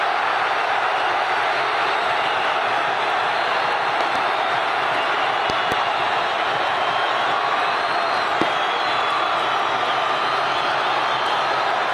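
A likely voltage spike, from a plug, switch or static discharge, jolts the signal path, producing a loud pop standing roughly 15 dB above the audio: double pops at 4.01–4.18 s and 5.50–5.74 s, then a single one at 8.42–8.44 s, with sound continuing underneath.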